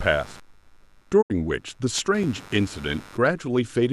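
A low buzz pulsing at roughly 100 times a second sits about 25 dB under the speech for the whole clip: computer activity noise, where processor or graphics load currents disturb the shared ground of the audio circuit. From 1.21 to 1.32 s the speech fades out over about 20 ms and goes silent, with about 72 ms missing. This is a digital broadcast dropout, where the receiver muted corrupted frames, probably around three of them. Between 1.47 and 3.25 s, eight short ticks, none longer than a few milliseconds, are CD scratch ticks: a blemish overwhelms error correction on each disc rotation and the player patches the gap.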